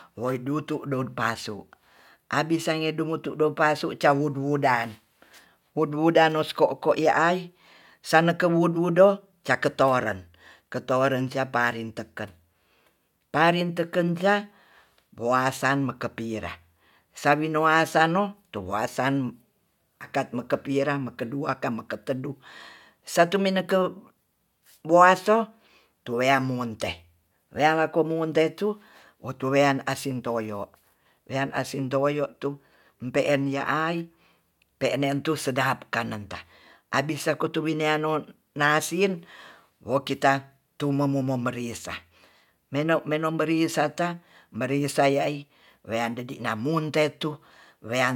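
A speech recording with no audible technical faults.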